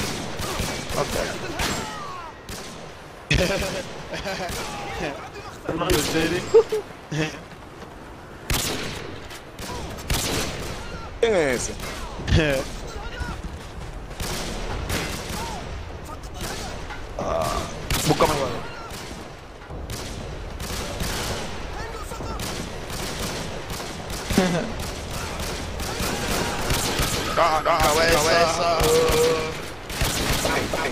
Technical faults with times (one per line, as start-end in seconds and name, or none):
26.21-30.91 doubled audio track